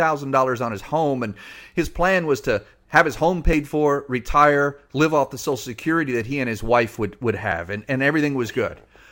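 A speech recording with three tiny skips where a few milliseconds of audio go missing between chunks: at 3.53 s, after "to have his home"; at 5.52 s, after "retire live off the"; and at 7.52 s, after "his wife would would" and before "and and". The sound jumps forward with no silence inserted. Unlike random dropouts, the skips fall at an exact 2.0 s spacing, which likely points to a recorder losing a sliver while switching chunks.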